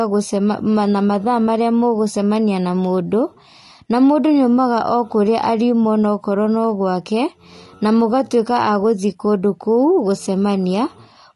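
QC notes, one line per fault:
Throughout: low-delay AAC compression. The speech is plainly rough and grainy, likely from AAC-ELD's short frames smearing harmonics, which fits a bitrate around 32 kbps.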